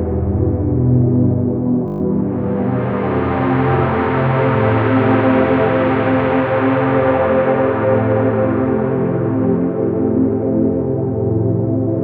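At 1.88 s the system hung while the audio hardware kept replaying its ring buffer, a system hang loop. One 20 ms slice repeats six times until 2.0 s, giving a brief buzz at 50 Hz and replacing roughly a tenth of a second of sound.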